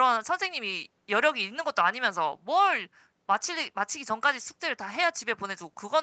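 No technical faults are audible.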